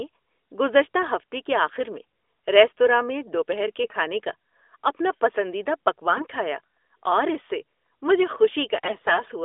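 Brief hoarse, gargly scratchiness at 3.84 to 3.96 s, 6.10 to 6.21 s, and longer at 8.66 to 9.24 s: AMR bit errors, where a few percent of weakly protected codec bits arrived flipped, misplacing excitation pulses while pitch and level roughly hold.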